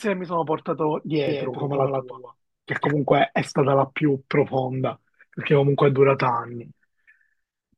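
A second, slower capture path is likely feeding the same speech into the mix, producing a doubled audio track from 1.28 s to 2.94 s. A full-band copy trails the original by roughly 150 ms at around 5 dB lower, with no decay or room colour. It gives each syllable a dry, slapback-like echo, and the copy cuts in and out abruptly at both ends.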